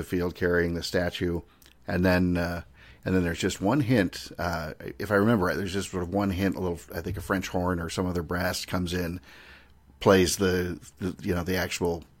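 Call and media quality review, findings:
No defects found on review of the speech recording; no fault to attribute to any component.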